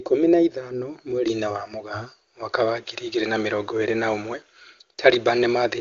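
No technical faults occur in this speech, so there is nothing to describe in time order.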